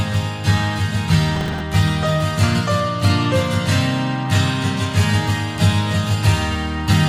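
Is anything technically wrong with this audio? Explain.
Yes, there is one fault. From 1.36 to 1.61 s there is processor overload crackle. The processor repeatedly missed its deadlines for buffers of around 10 ms, roughly ten times, and each time it replayed stale audio with abrupt edges. This produces a gritty tearing. On the waveform it appears as hard discontinuities and repeated chunks, and on the spectrogram as dense vertical broadband streaks.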